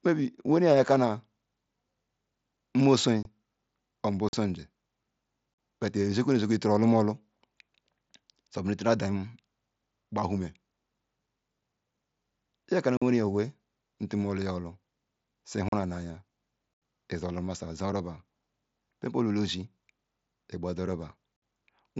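At 3.23 s, 4.29 s, 5.54 s, 12.97 s, 15.69 s, 16.74 s and 21.36 s the speech drops out in unconcealed Bluetooth headset packet loss. These are hard-edged holes of 22.5 to 82.5 ms, the longest at 16.74 s. They follow "or mgbo", precede "bet icholumulu", and sit between "iya kanu" and "yin owe nturu du". Missing radio packets were replaced by silence, not patched over. Gap lengths in multiples of 7.5 ms fit lost mSBC frames on this wideband link.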